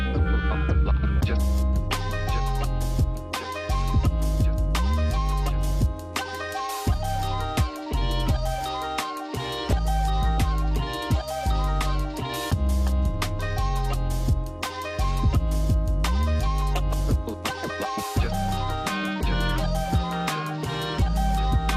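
MP2 compression runs throughout: the sound is dull and gurgling, likely from Layer II coding starved of bits, consistent with roughly 80 kbps, so upper sub-bands flicker out. DAB burbling at 9.58 to 9.73 s: a small fraction of bit errors slipped past correction, putting short blips of noise into single sub-bands for a brief moment.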